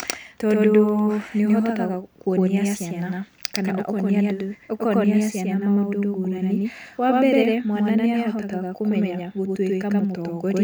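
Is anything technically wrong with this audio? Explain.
Yes. Throughout the speech a doubled audio track is audible: an equally loud, full-band copy trails by about a tenth of a second, likely from a second capture path. Unlike echo or reverb, it has no decay or room colour.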